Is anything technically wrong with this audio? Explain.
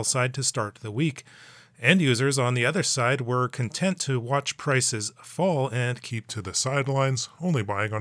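Yes. From 6.10 s to the end at 8.01 s there is a wrong sample rate fault: the samples are replayed slower than captured, consistent with 24 kHz material clocked out at 22 kHz. Speed drops to 0.92 times and pitch falls about 1.5 semitones, so the sound turns lower and sluggish.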